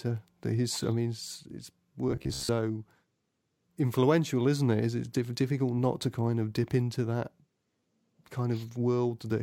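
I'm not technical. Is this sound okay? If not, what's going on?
No. From 2.09 to 2.49 s, just after "I mean his his", there's robotic sound from repeated short buffers. Audio likely arrived too slowly, so the software replayed the same tiny slice, about 15 ms long, over and over for roughly half that stretch. This creates a low metallic buzz around 67 Hz.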